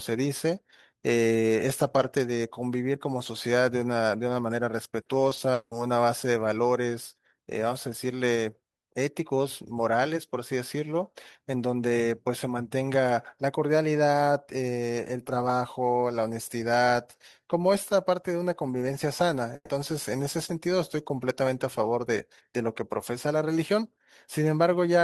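From 5.01 to 5.73 s there is repeated packet loss, giving a robotic sound. Four gaps fall in this stretch, the longest about 180 ms. Each is patched by extending the preceding sound, so about 260 ms of audio is missing. Roughly a third of the span sounds choppy and robotic.

At 19.55 s a burst of packet loss occurs, lasting until 19.71 s. About 140 ms of audio never arrived. The receiver held the last sound and faded it down, ending in about 50 ms of silence. Speech then resumes with that piece gone.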